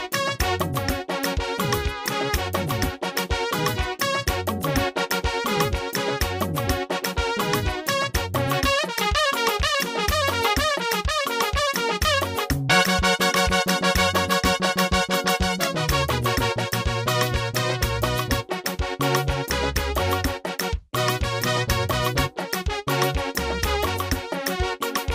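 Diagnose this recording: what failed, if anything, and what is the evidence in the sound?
Nothing in the recording points to a failure at any stage of the chain. No event in the sound calls for a diagnosis, so there is no fault to locate or explain.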